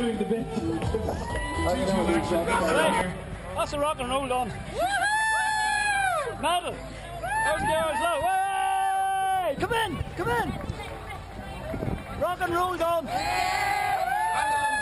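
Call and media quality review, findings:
Imaging from linear upsampling, 9.35–14.21 s. Resampler joins samples with straight lines, a weak anti-imaging filter. Images fit a 24 kHz to 44.1 kHz conversion. Top of band dulled, mirror copy at 12–24 kHz around 30 dB down. Light metallic shimmer on bright content.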